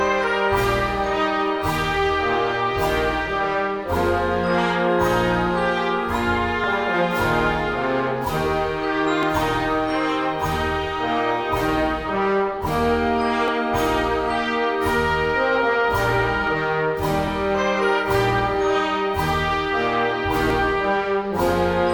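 At 6.64, 9.23, 13.48, 16.47, 17.28 and 20.50 s the sound jumps slightly ahead, losing a few milliseconds each time: around 15 ms at the first and last, around 10 ms at 16.47 s, and only a handful elsewhere. This is likely a dropped buffer (overrun), where samples were overwritten before being read and the surrounding audio was spliced together. Unlike a dropout, there is no silent gap, only the abrupt join.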